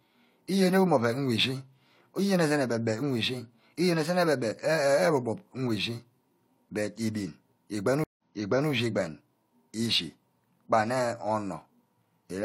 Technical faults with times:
8.04-8.69 stream reconnect

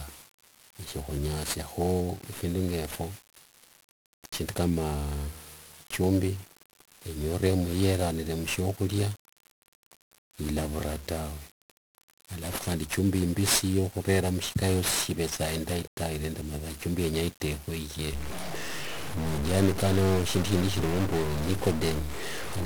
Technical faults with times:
0.00-22.65 1-bit DFPWM compression
18.13-22.65 stuck bit

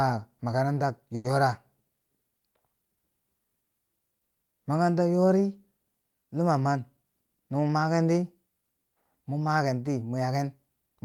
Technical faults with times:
1.15-1.26 short stall from a late packet
6.97-7.84 jitter buffer speed-up

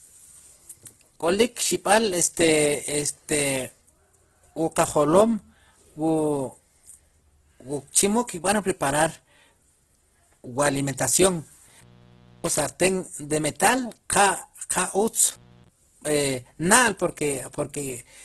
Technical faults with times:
0.00-18.24 Opus compression
11.65-12.61 intermittent contact
15.29-15.69 intermittent contact

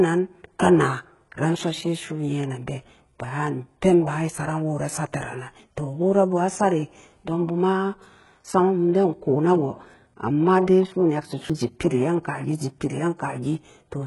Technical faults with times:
0.00-14.07 HE-AAC compression
5.60 audio missing between chunks
11.50 audio missing between chunks

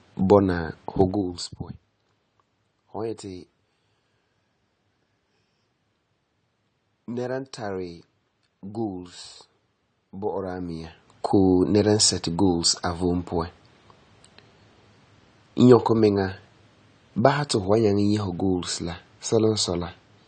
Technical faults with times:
0.00-20.27 AAC compression
0.96-1.44 zipper noise
10.24-11.36 zipper noise

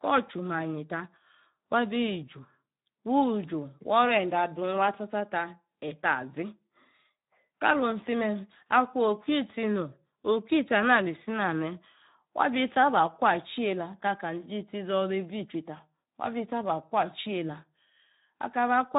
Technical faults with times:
0.00-18.98 Speex codec

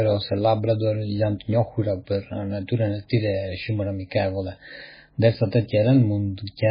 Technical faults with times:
0.00-6.71 MP3 compression

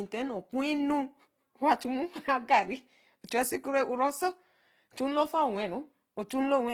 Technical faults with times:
0.00-6.74 Opus compression

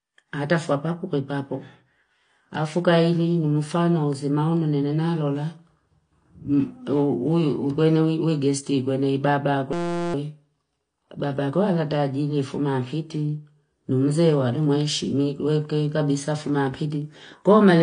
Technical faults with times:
0.00-17.82 AAC compression
9.73-10.14 system hang loop

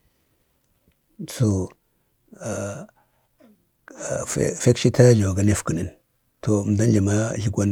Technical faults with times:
1.51 dropped samples
3.88 dropped samples

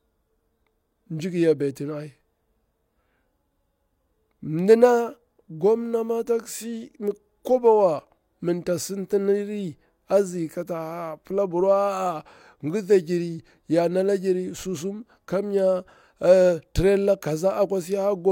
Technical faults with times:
none

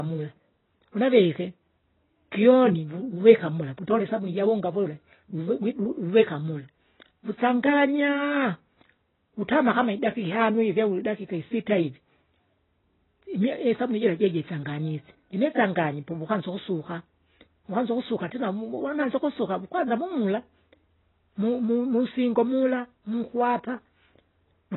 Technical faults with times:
0.00-24.76 AAC compression

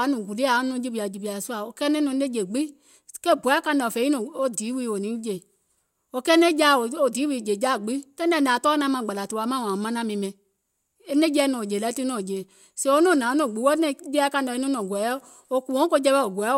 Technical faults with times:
none

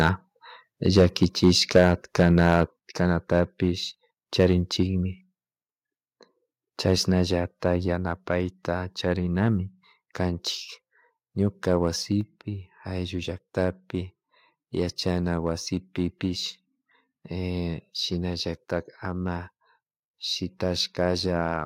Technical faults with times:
0.00-0.09 microphone overload
0.86-1.93 microphone overload
1.78 microphone volume stepped down
2.19-2.63 microphone overload
2.79 microphone volume stepped down
4.39-4.47 microphone overload
6.87-6.93 microphone overload
7.95 microphone volume stepped down

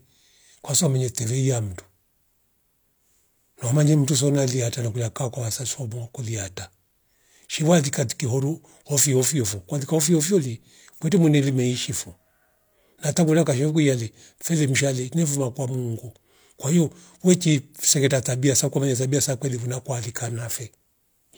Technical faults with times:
none

